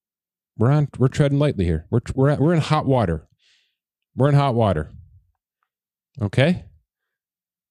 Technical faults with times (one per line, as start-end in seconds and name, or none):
none